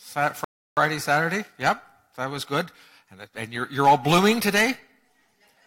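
A rebuffering stall runs from 0.44 to 0.77 s. Playback drained its store of downloaded audio and had to wait for more data before it could continue. The sound drops abruptly to silence for about 0.33 s, then picks up at exactly the point where it broke off. No material is skipped or repeated. The gap simply inserts dead time and lengthens the clip by that amount.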